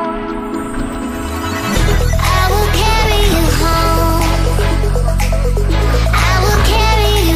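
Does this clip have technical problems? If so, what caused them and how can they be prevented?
Yes. Dropped samples at 2.86 s, 4.2 s and 5.8 s: each is one sharp, isolated click. It is likely caused by a sliver of the stream, well under a millisecond, going missing, so the waveform leaps straight from one value to a later one. Giving capture and processing buffers enough headroom to avoid underruns, on a stable clock, prevents it.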